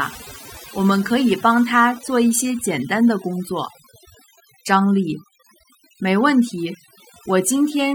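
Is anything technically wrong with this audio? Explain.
Yes. Throughout the speech there is overdone noise removal: a noise reducer set too aggressively pulls individual frequency bands down whenever they sit near its noise estimate, taking quiet speech detail with them. The background drops and breaks up into twinkling specks.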